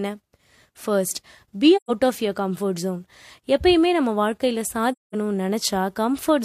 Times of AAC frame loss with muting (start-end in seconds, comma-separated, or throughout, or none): 1.76-1.91, 4.92-5.15